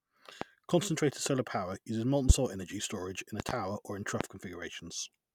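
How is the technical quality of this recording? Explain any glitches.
The speech is marred by four loud pops: at 0.41–0.45 s, at 2.30–2.33 s after "solar power uses molten", a double pop at 3.40–3.53 s after "energy storage in a", and at 4.21–4.24 s after "or in". Each is a sharp thump roughly 20 dB or more above the voice, which carries on underneath. They're likely voltage spikes from a switch, connector or static hitting the signal chain.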